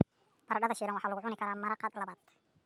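From start to finish the speech plays back too fast and too high, the mark of a wrong sample rate: the samples are being clocked out quicker than they were captured, with no conversion, which fits a 32 kHz recording played at 48 kHz. Everything runs 1.5 times faster and sits about 7 semitones higher, giving a hurried, chipmunk-like quality. On a spectrogram, harmonics and formants sit 1.5 times higher than normal, and the waveform's events are squeezed closer together in time.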